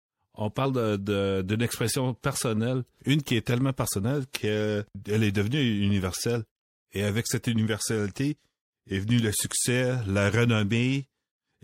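Speech runs throughout with plainly audible MP3 compression damage: a watery, swirly quality, chirpy metallic s sounds and smeared consonant onsets, which fits a low bitrate around 64 kbps. The likely cause is an encoder short of bits, chopping off the treble and dropping weak frequency lines that blink on and off between frames. A spectrogram would show a flat ceiling where the high end stops, with speckled, flickering patches just beneath it.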